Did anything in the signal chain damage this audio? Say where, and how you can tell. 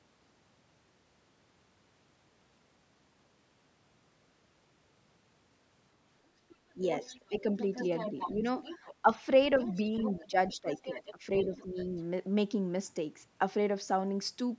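Yes. Other side's voice leaking through at 6.5–9.16, 9.59–11.12 and 11.45–12.01 s, roughly 10 to 20 dB under the talker: likely residual loudspeaker echo the call's echo canceller missed.

Speech suppressed in double talk at 6.75–7.47, 8.11–8.46, 9.02–9.08 and 10.19–11.77 s. The talker dips by up to about 15 dB, likely while the echo canceller ducks both voices.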